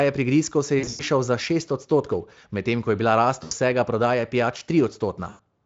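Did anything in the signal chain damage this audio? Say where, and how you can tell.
Yes, at the network stage: VoIP packet loss concealed by the speech codec. Around 0.79 to 1.02 s, 3.43 to 3.54 s and 5.29 to 5.40 s, the speech smears into a fading buzzy tone or coloured noise as the decoder extrapolates its last pitch. The light Speex coding underneath adds only slight codec damage.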